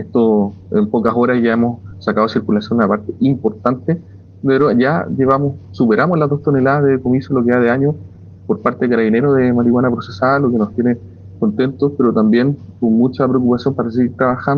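Between 0.9 and 1.55 s there are scattered short gaps: about five brief dropouts where packets arrived late or not at all. Each hole, the longest around 10 ms, was concealed by the receiver extending the preceding sound, so roughly 40 ms in all, a small share of that stretch, is synthetic fill. The audio stays largely clear through the span but carries brief ticks and smearing hiccups where the patches sit.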